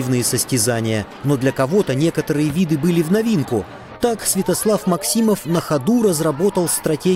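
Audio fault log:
throughout, computer activity noise: load swings in the computer's processor, graphics or input devices are pulling on the ground the audio circuit shares with them, so that ground no longer sits still. The movement leaks into the signal as a faint buzzing, chirping texture pulsing at around 500 times a second, roughly 40 dB below the sound itself. It rises and falls with what the machine is doing rather than following the audio.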